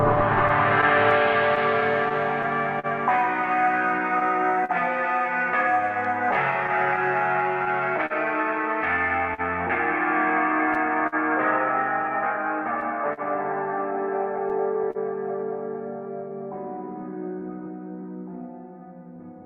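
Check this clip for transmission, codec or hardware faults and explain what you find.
Three transmission faults are present, all tied to timing.

Clock drift between sender and receiver runs throughout. The sender's clock is roughly 3% slow, so the receiver's buffer keeps draining and must be topped up.

Scattered short gaps occur from 0.15 to 14.98 s. Around twenty packets arrive late or missing, the longest near 50 ms. Each is patched by extending the last sound, leaving brief smears and ticks.

Repeated timing corrections run from 14.39 to 19.44 s. The receiver repeats short pieces, adding about 100 ms. Playback slows to 98%, heard at most as slight hiccups.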